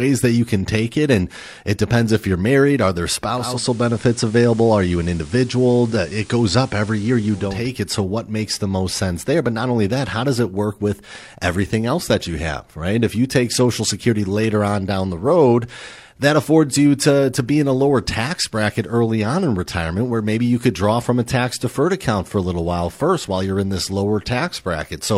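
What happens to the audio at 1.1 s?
Nothing goes wrong at 1.1 s: the speech there carries on intact, with no dropout, click, distortion or other fault to be heard.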